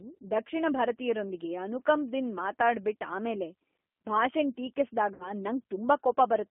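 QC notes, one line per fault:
Throughout: G.729 codec damage, plainly audible. The 8 kbit/s coder rebuilds speech from a few pulses and filter settings per frame, giving a rough, synthetic edge. On a spectrogram energy sits between 250 Hz and 3.4 kHz, with nothing above and smeared harmonics.
5.14 to 5.32 s: VoIP packet loss concealed by the speech codec. About 60 ms of audio went missing, which fits three 20 ms packets. The decoder repeated its last pitch and filter, so a fading buzzy tone or coloured noise replaces speech. The spectrogram shows flat repeated harmonics, and the waveform envelope decays before recovering weakly.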